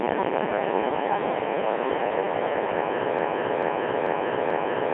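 A speech recording that, from 3.19 s to the end, turns into a broken-record loop: the same fragment of about 0.44 s plays four times back to back with no gap or change, so the sound stutters mechanically instead of moving forward. Whatever should have been heard in that last stretch is gone. The cause is likely a stall in the player, encoder or stream, which kept resending the last piece of audio it held.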